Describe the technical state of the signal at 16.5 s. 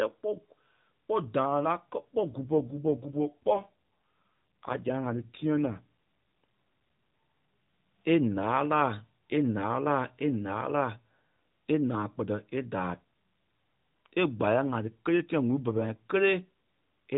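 At 16.5 s the speech comes through intact, with no dropout, click or other fault, only the narrowband sound of the mobile codec it travels through, which cuts everything above 4 kHz.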